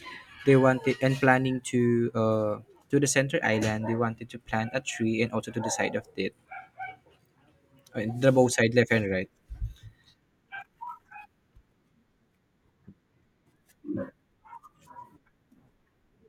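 At 2.54 s, between "to uh" and "to the center", and again at 10.87 s, a single sharp click is heard, likely from dropped samples: a couple of samples go missing and the waveform jumps. Unlike a dropout, no sound is audibly lost.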